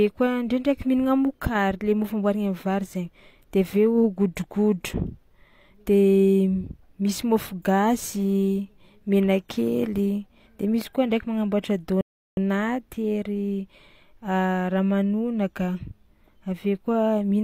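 A rebuffering stall interrupts this speech recording at 12.01 s: the audio drops to silence until 12.37 s, then picks up exactly where it stopped. The player exhausted its downloaded buffer and waited for more data, inserting about 360 ms of dead air without losing any content.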